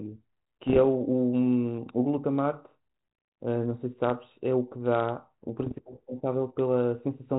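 Bit errors on an ADPCM link strike this speech twice, from 0.67 to 0.79 s and from 5.60 to 5.79 s, at a rate near half a percent, slightly higher in the second burst. Each flipped bit throws off the decoder's step size and predictor, so the damage rings on past the error itself. The result is pops and rough, gritty bursts with brief jumps in level, over band-limited telephone audio with the light texture of 32 kbit/s ADPCM.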